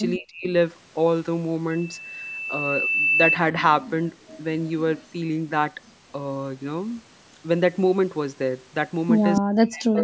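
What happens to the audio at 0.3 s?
Speech suppressed in double talk is the likely cause: with both ends talking at once, the echo canceller could not tell the local voice from loudspeaker echo and turned both down. From 0.17 to 0.46 s the speech sinks sharply, by roughly 40 dB at its deepest.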